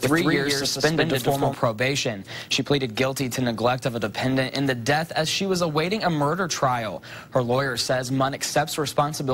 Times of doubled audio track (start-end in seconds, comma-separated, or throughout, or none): 0.00-1.54